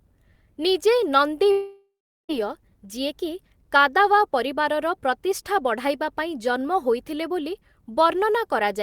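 Long network dropout, 1.51 to 2.31 s, in this speech clip: the audio stops arriving and the receiver stretches the last sound into a buzzy, hissing tail that fades away, leaving about 0.38 s of silence before the speech resumes. Roughly 0.78 s of the original speech is simply gone, so the talker jumps ahead on return. The likely cause is a run of lost or late network packets that the decoder's concealment could only paper over briefly.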